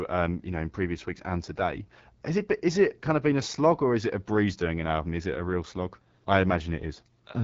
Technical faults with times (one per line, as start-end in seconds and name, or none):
0.00-7.43 AMR wideband (HD Voice) codec